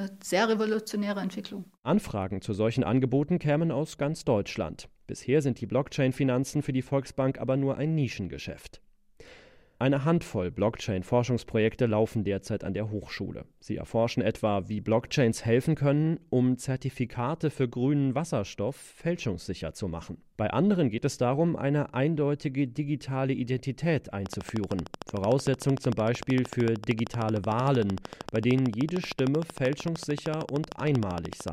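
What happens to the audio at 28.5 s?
A train of clicks runs from 24.26 to 31.49 s, about a hundred evenly spaced pops at 13.2 per second, peaking well above the speech and audible in pauses too. The likely cause is interference or a faulty connection or power supply; its steady, identical ticks distinguish it from random crackle.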